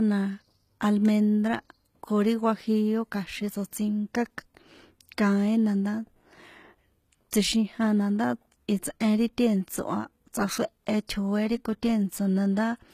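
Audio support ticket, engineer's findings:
Low-bitrate audio saved at a high bitrate, throughout: likely an earlier low-bitrate encode, consistent with HE-AAC around 20 kbit/s, re-encoded to MP3 at a high bitrate. Speech has nothing above 14.9 kHz. Coding artefacts from the first pass remain. The high-bitrate MP3 layer adds size, not detail; removed content stays lost.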